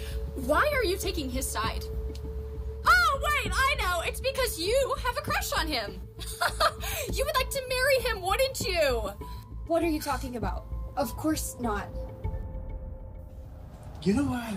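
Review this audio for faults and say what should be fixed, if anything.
Nothing here needs fixing, as no faults turn up anywhere in the audio.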